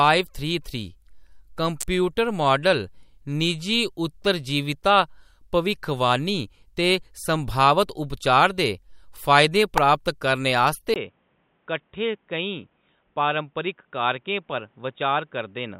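At 1.81 to 1.83 s a sharp snap cuts across the speech. A second, shorter click follows at 9.78 s. Both sound like an electrical switching spike, likely a nearby switch or static discharge arcing briefly and leaking into the audio line.

At 10.94 s the sound drops out for about 20 ms. It then returns dull and boxy until the end. Nothing reaches above 3.8 kHz, and the level falls by about 5 dB. A new noise floor sits roughly 45 dB under the speech. This is likely the input switched to a poorer device with a narrower band.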